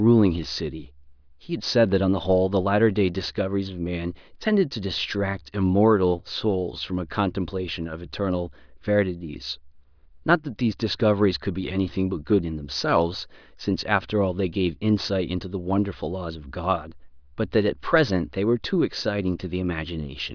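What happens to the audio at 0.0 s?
Nothing goes wrong at 0.0 s; the speech starts cleanly there, with no fault at that moment.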